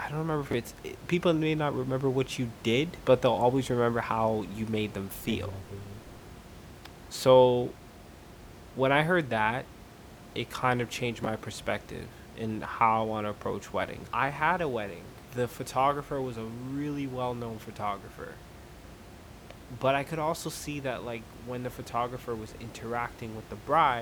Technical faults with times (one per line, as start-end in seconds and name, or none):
0.51-0.53 chunks out of order
11.24-11.26 chunks out of order